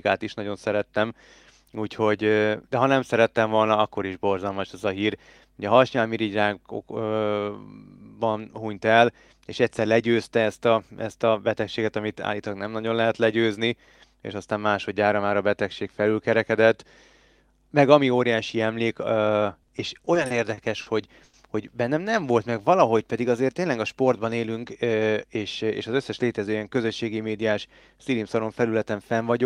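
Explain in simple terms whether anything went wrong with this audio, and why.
Yes, several things went wrong, all caused by the speech arriving unevenly over a call connection and the receiver compensating.

Repeated stalls (stutter) occur from 19.47 to 20.88 s, just after "meg ami óriási emlék". The audio ran out eleven times, and each time the receiver held the last sound, 190 ms in total and at most 50 ms at once. Nothing is lost, but the speech drags and stutters.

A short stall from a late packet occurs from 21.24 to 21.35 s. One piece of audio arrived late, so the receiver stretched the previous sound for 90 ms and then resumed exactly where it left off. A sound is held too long.

A jitter buffer slow-down runs from 22.20 to 23.05 s, just before "pedig azért tényleg a". The receiver was low on stored audio, so it repeated tiny slices of the sound, adding 89 ms. Speech plays at about 90% speed with unchanged pitch and sounds drawn out.

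A jitter buffer speed-up runs from 25.02 to 26.85 s, between "tényleg a sportban élünk" and "médiás szilimszaron". Too much audio had built up, so the receiver cut out tiny slices, roughly 150 ms in total. Speech runs at about 107% speed, at the same pitch, and sounds hurried.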